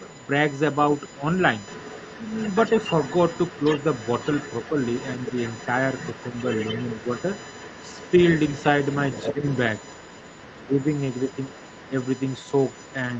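Right from the start there's a steady, fixed-pitch whine at 1 kHz sitting about 20 dB under the speech for the whole clip. That's USB whine: the bus does its housekeeping in 1 ms frames, and that rhythm leaks into the audio through the shared power or ground. A 1 kHz tone is exactly what the 1 ms frame rate gives you. It's always there.

From about 0.11 s to the very end, you can also hear a second, fainter voice underneath, roughly 15 dB below the main talker. That's the other side's voice leaking through, most likely because the talker's device was playing the other side out of a loudspeaker and the echo canceller didn't fully scrub it from the mic.

The same tug-of-war shows up as speech suppressed in double talk. When both sides are going at once, the canceller likely can't tell the talker from the echo and ducks everything, so the main voice dips. It happens in short bites between 0.0 and 1.25 s and briefly around 4.69 to 4.77 s, with shallow drops of about 5 dB. 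It gets deeper, around 10 dB, at 9.3 to 9.43 s and then across a longer patch from 10.58 to 11.96 s.

Nothing comes through above 8 kHz, which points to the call's Opus path doing its usual band-limiting.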